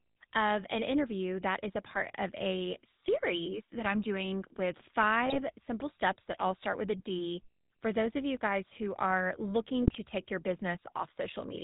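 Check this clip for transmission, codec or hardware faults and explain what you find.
Two faults are present: GSM full-rate coding across the whole speech clip, and three short bursts of GSM bit errors.

GSM full-rate codec, throughout: the coder rebuilds the voice from a vocal-tract model driven by sparse regular pulses. The result is buzzy and gravelly with nothing above 4 kHz, consistent with 13 kbps full rate.

GSM bit errors, at 1.90–2.02 s after "interview that is a", 5.26–5.36 s after "that I'm doing with" and 9.82–9.99 s after "you guys who are": corrupted filter, pitch or gain values distort the decoded frames into brief squawks, pops and gargling.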